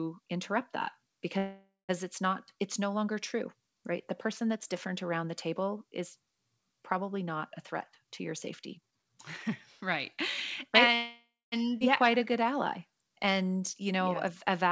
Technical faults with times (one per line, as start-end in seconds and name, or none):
1.38-1.91 call audio freeze
8.01-10.88 jitter buffer speed-up
10.95-11.54 call audio freeze
11.80-11.82 skip ahead
12.07-14.69 jitter buffer slow-down